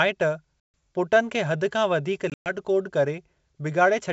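Packet loss on an ADPCM call strikes at 0.60 to 0.74 s, a hard-edged 140 ms hole of silence that fits around seven lost packets, and again at 2.30 to 2.55 s, where 140 ms goes missing in gaps spread over 160 ms, the longest run 120 ms. With the stream cut, the receiver's adaptive predictor and step size drift away from the sender's. The speech therefore comes back clicking, distorted or at the wrong level, and recovers within tens of milliseconds, through an otherwise clean wideband G.722 path.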